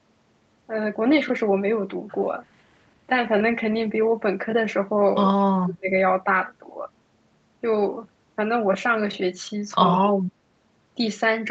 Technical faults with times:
5.40-5.89 speech suppressed in double talk
9.93-10.26 speech suppressed in double talk

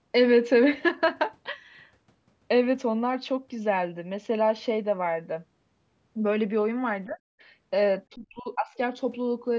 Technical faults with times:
7.06-7.19 speech suppressed in double talk
8.14-8.70 speech suppressed in double talk

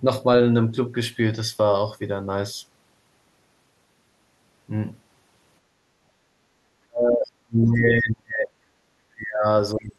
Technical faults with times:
5.62-6.50 background gated by the echo canceller
6.86-8.53 speech suppressed in double talk
9.10-9.46 speech suppressed in double talk
9.74-9.98 speech suppressed in double talk

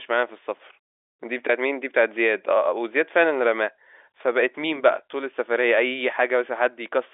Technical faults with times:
none

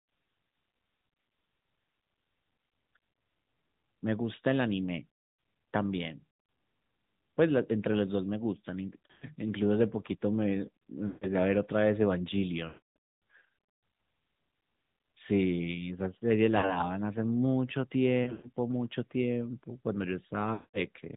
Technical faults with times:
0.00-21.16 AMR narrowband mobile codec
9.06-9.25 lost AMR speech frames
11.08-11.27 lost AMR speech frames
12.68-12.96 lost AMR speech frames
16.58-16.87 lost AMR speech frames
18.24-18.51 lost AMR speech frames
20.54-20.79 lost AMR speech frames

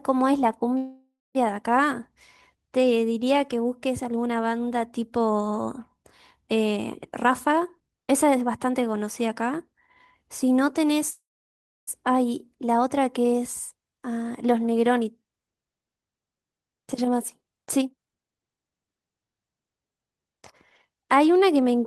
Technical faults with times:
0.77-1.37 call audio freeze
7.24-9.74 jitter buffer speed-up
10.23-10.58 jitter buffer speed-up
11.10-11.89 call audio freeze
17.62-19.36 jitter buffer speed-up

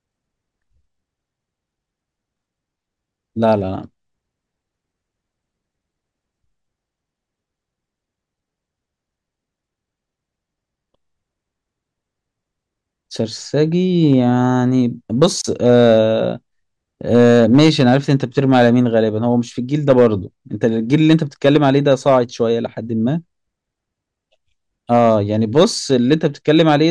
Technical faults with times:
0.00-26.91 hard clipping
15.41-15.44 gap at a join of encoded pieces

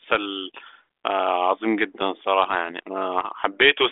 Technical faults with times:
none

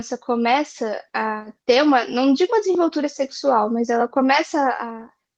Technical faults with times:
none

